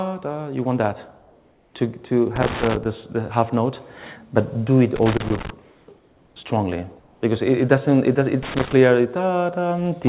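From 1.2 to 1.74 s the quiet background, about 39 dB below the loud passages, gives way to comfort noise in place of the background: a steady, featureless hiss about 1 dB lower, likely synthetic noise filled in by the receiver while discontinuous transmission paused the sender. Loose connector crackle follows at 2.36 to 2.86 s and 4.96 to 5.50 s, an irregular scratchy burst as a poor contact breaks and remakes the signal path. Comfort noise returns at 5.62 to 5.88 s (no level change), 5.96 to 6.36 s and 7.0 to 7.22 s (both about 3 dB quieter), each flattening the background's texture. A last crackle burst runs from 8.43 to 8.73 s. Throughout, nothing is heard above 4 kHz, consistent with a narrowband 64 kbps G.711 call path.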